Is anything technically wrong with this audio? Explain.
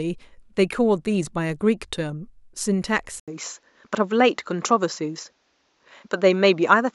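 Yes. At 3.20 s the speech drops out for about 80 ms, and from there to the end it sounds like a different microphone: nothing above 7.6 kHz, so it turns duller and a bit boxy, the level shifts by roughly 5 dB, and a new, quiet background noise appears well under the speech. That pattern is most likely an input switched to a poorer device mid-recording, with the narrower band and its own noise and gain replacing the original chain.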